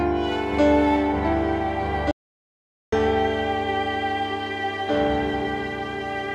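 At 2.11 s the music drops straight into dead digital silence and stays there until 2.92 s, roughly 0.81 s with no room tone at all. That's an audio dropout to silence, most likely the input going away briefly while recording carried on writing silence.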